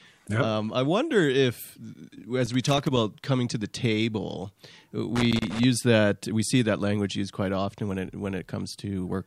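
At 2.46 s the speech is broken by loose connector crackle lasting about half a second, ending at 2.97 s just before "coming to the table". A second burst runs from 5.16 to 5.64 s, ahead of "that we see that". In both, a worn or dirty contact is making and breaking rapidly, chopping the signal on and off, so the passage turns into irregular crackle and scratching rather than steady sound.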